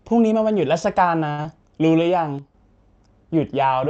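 At 1.31 s a packet arrived late and the jitter buffer ran dry, so the receiver held the last sound for about 68 ms until 1.41 s, a short stall heard as a slightly buzzy hold with nothing lost. From 1.42 to 1.47 s a short concealed packet loss follows: roughly 40 ms never reached the decoder, and the gap was patched by extending the preceding sound, giving a brief smear as playback jumps about 20 ms ahead. Between 2.39 and 2.54 s one channel drops out, likely from one stereo channel being lost before the mono sum, so the level falls abruptly by about 6 dB and then recovers.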